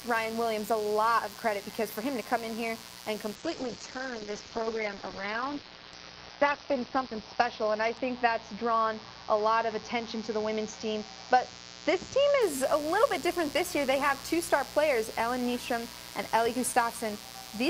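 A mains buzz runs through the whole clip, sitting roughly 15 dB below the wanted sound. Its fundamental is 60 Hz, but what reaches the ear is a raspy, edged tone, because sharp switching spikes from a dimmer, rectifier or unshielded run enter the signal twice per mains cycle and spray harmonics of 60 Hz well up into the kilohertz range. The buzz stays constant in character from start to finish.

From 3.37 s to 12.47 s there is a call bitrate drop. The transmission's bandwidth estimate collapsed and the encoder was pushed to a much lower rate. The sound points to a fall from around 32 kbps to around 8 kbps, with the lowest rate held for about 3.3 s. The encoder coded more coarsely and narrowed the audio band from 20 kHz to 6 kHz, so the sound turns muffled, watery and rough until the rate recovers.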